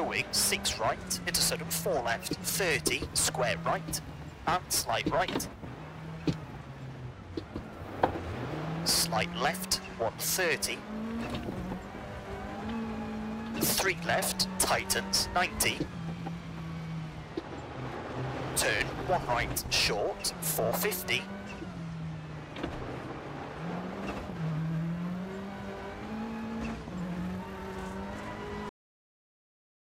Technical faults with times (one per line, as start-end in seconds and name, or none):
28.69-29.93 cut-off end